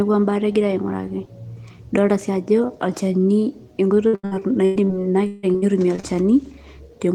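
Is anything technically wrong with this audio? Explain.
Yes. From 4.07 to 4.91 s and again from 5.27 to 6.05 s, the speech suffers repeated packet loss (robotic sound). Audio packets failed to arrive on time over and over, and the receiver covered each hole by extending the last sound it had. The gaps add up to about 360 ms in the first stretch and about 300 ms in the second, the longest being 100 ms and 158 ms. That leaves the speech choppy, with pieces missing.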